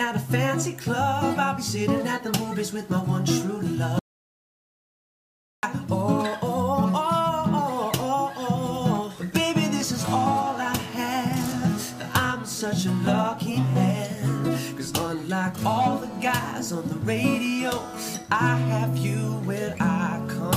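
At 3.99 s the sound drops out cold and stays gone until 5.63 s, roughly 1.6 seconds of silence. That's an audio dropout to silence: not even room tone survives, so the input itself vanished while the recorder kept writing silence. The likely cause is a link or device losing connection briefly, or a mute getting hit. Whatever was happening in that stretch is simply lost, and the audio resumes mid-flow.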